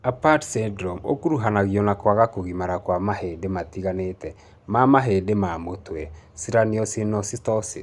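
Nothing in the recording stood out as a technical problem on listening.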